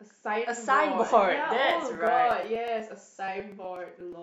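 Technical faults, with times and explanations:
1.59–4.13 s, periodic USB or driver dropouts: about twenty ticks recur every 0.121 s as a few milliseconds of speech are skipped at each driver stall. Unlike random crackle, the clicks are evenly spaced and appear only while speech is present.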